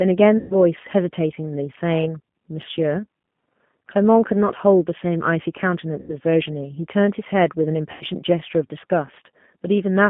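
G.729 codec damage runs through the whole speech recording. The band stops near 3.4 kHz with thin lows below about 150 Hz, and the low-rate pulse excitation gives the voice a rough, synthetic edge, consistent with an 8 kbit/s G.729A stream. VoIP packet loss concealed by the speech codec occurs at 0.38–0.56 s, 6.00–6.17 s and 7.92–8.04 s, covering about 120 ms, 90 ms and 90 ms of missing audio. The decoder stretches its last pitch and filter state into a fading buzzy tone or coloured noise, and the voice stays weak briefly after each gap.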